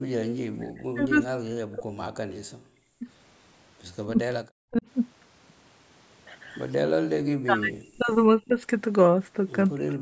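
From 0.0 to 0.32 s, the echo canceller clamped the microphone hard while the loudspeaker was playing, so the background was gated by the echo canceller. The room sound drops away briefly by up to about 40 dB, then returns.

The later dips are likely due to double talk: with both sides talking at once, the canceller could not separate the local talker from the loudspeaker echo and turned both down. Speech is suppressed in double talk from 0.6 to 3.07 s, 4.06 to 4.85 s, 7.42 to 8.59 s, and 9.75 s to the end. The voice dips, sinking by roughly 40 dB at worst.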